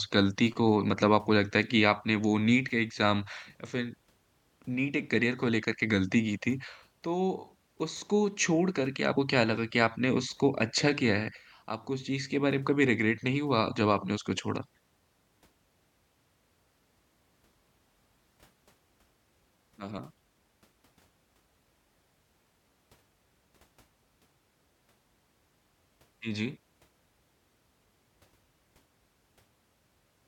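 At 9.16 s the speech jumps ahead, with roughly 50 ms missing, which fits about two compressed frames of 26.1 ms being skipped. At 11.30 s there's a shorter jump of around 30 ms, likely a single frame. Those frames never got played, either because they were missing or because the decoder rejected them.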